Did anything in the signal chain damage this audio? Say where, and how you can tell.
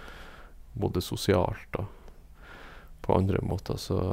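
No, nothing in the signal chain audibly damaged this speech recording: its level, timing and continuity hold steady throughout, with no sign of trouble at any stage from capture to playback.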